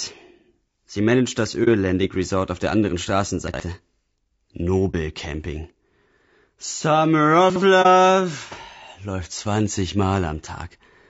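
Speech throughout has a rough, grainy texture, with noise filling the gaps between pitch harmonics and a thin, synthetic-sounding top band. This is plainly audible codec damage, likely from low-delay AAC compression (AAC-ELD) at a low rate, which fits roughly 32 kbps. Its short frames resolve harmonics poorly and leave too few bits. AAC frame loss with muting appears at 1.64 to 1.68 s, 4.91 to 4.95 s and 7.82 to 7.87 s. Each is a brief soft-edged dropout consistent with one lost frame of about 30 ms whose spectrum was zeroed, with the overlapping windows fading out and back in. Chunks out of order occur at 3.48 to 3.60 s and 7.50 to 7.62 s. In each, a 60 ms chunk plays one chunk late, swapped with its neighbour, giving a jumbled moment with hard joins.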